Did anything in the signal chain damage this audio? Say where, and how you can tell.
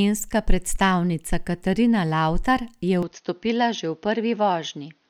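Yes: at the driver stage, the input was likely switched to a poorer device at 3.03 s. From there to the end the sound turns dull, with nothing above 6.5 kHz, level down around 5 dB, a faint new noise floor, and no gap at the switch.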